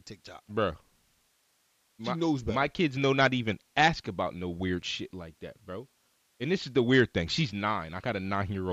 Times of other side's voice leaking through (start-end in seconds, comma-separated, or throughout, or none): none